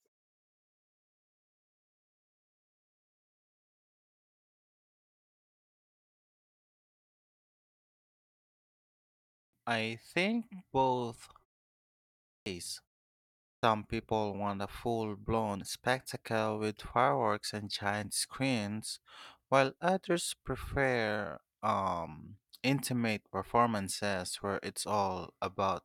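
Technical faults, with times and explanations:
8.93 s, 11.88 s, 13.09 s: clipped start after a pause. The waking output device swallows 0.54–0.60 s of onset, so the waveform jumps abruptly from flat silence.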